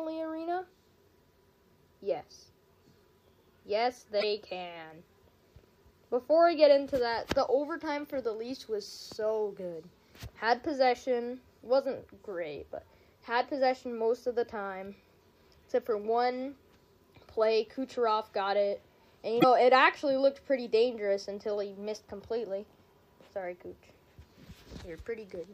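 Frames appear to have been dropped from the MP3 stream, most likely breaking the bit reservoir. The frame after each gap reaches back for borrowed data and decodes bytes from unrelated frames instead. At 4.19 to 4.24 s and again at 19.40 to 19.44 s, the audio skips forward and the first frames after the cut come out corrupted for about 44 ms, less than two of the 26.1 ms frames.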